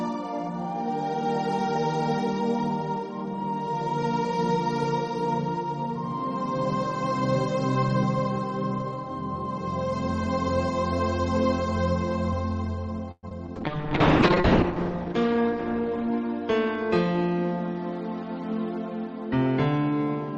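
At 13.11 s the audio stalls for about 0.13 s: the last sound carries on as a fading buzz, drops to near-silence for about 30 ms, then resumes exactly where it stopped. That is a call audio freeze, likely from packets held up in transit. Because nothing is lost, it differs from packet loss. Two short concealed packet losses follow at 13.29 s and 13.47 s. Each is a brief smear where about 20 ms of audio never arrived and was patched from the preceding sound, and unlike the freeze, real content is missing. From 13.56 s to 17.38 s a call bitrate drop from 64 to 7 kbps makes the sound rough and muffled, with the top end narrowing from 20 kHz to 8 kHz and the worst stretch lasting about 1.1 s. It is a lasting change in tone rather than a momentary break. Overlapping it, a jitter buffer speed-up from 15.34 s to 17.06 s plays the audio about 4% fast at unchanged pitch, trimming about 70 ms of backlog. 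It hurries the timing without dulling the sound.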